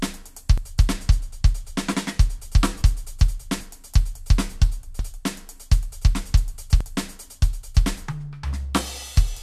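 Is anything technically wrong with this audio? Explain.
Yes, there are two kinds of fault in this music clip.

At 0.58 s, 4.99 s and 6.81 s there are points where the music jumps forward abruptly with no gap of silence between the two sides. Roughly 40 ms, 20 ms and 70 ms of material go missing. The likely cause is a dropped buffer (overrun): the software failed to collect incoming samples before the hardware overwrote them, so that stretch was lost and the surrounding audio was spliced together directly.

From 0.93 s to 2.40 s one channel runs about one sample late, a few hundredths of a millisecond, and the channels are summed to mono. This channel delay produces comb filtering: content shared by both channels cancels at evenly spaced frequencies. With a delay this small, the first notch sits around 20 kHz, so the effect is a slight dulling at the very top of the spectrum rather than a strongly hollow, phasey sound.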